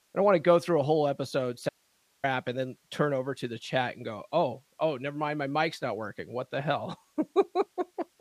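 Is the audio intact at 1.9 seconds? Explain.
No. An audio dropout to a faint residue runs from 1.69 to 2.24 s, after "through a whole episode": the speech cuts abruptly to hiss about 40 dB down, likely a lost signal on a still-live path, unlike a pause or fade.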